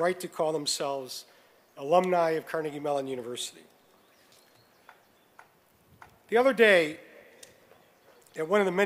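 No technical faults can be heard anywhere in this recording.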